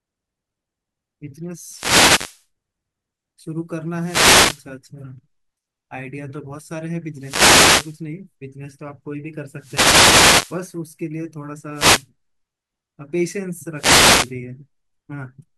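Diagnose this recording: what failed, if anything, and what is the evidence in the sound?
The analogue radio link of a wireless microphone failed, causing wireless microphone noise hits: swishing static bursts at 1.61–2.46, 3.95–4.68, 7.14–8.02, 9.55–10.65, 11.71–12.08 and 13.74–14.34 s. Reflections cancel the FM signal, so receiver noise swells over the speech. Unlike digital dropouts, the speech is buried under hiss rather than cut out.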